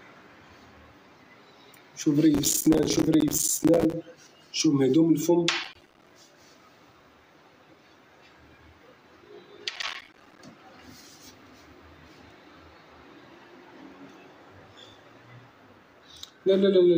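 Three bursts of processor overload crackle rip through the audio, from 2.35 to 3.94 s, 5.64 to 6.10 s and 9.76 to 10.39 s. The processor is falling behind and missing buffer deadlines over and over, and each miss drops in a tiny hard-edged silent gap. The chopping rate suggests buffers of around 5 ms, with dozens missed in each burst. That's why it sounds like gritty tearing that stops once the load eases.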